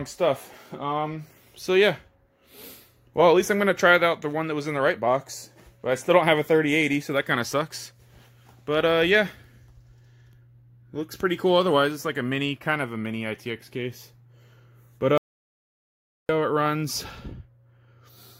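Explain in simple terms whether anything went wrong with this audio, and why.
At 15.18 seconds the sound stops dead, and for about 1.1 seconds there is total silence, not even the faint background hiss of the room, before it picks up again at 16.29 seconds. This is an audio dropout to silence. The likely cause is that the input was briefly lost, for example through a loose connection or an accidental mute, while the recording carried on saving pure silence. Whatever sounded during that gap is missing for good.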